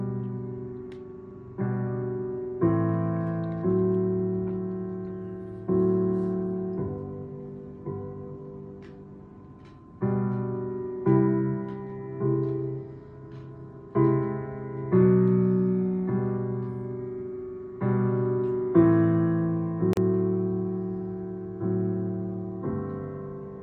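At 19.93 s a gap at a join of encoded pieces opens: a gap of about 38 ms, left by encoder start delay and last-frame padding when separately encoded segments were butted together untrimmed. Unlike a dropout, nothing is lost; the sound resumes exactly where it stopped, edges smeared.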